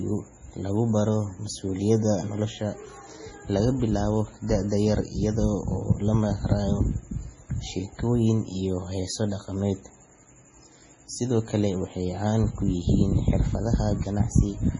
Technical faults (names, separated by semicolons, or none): MP3 compression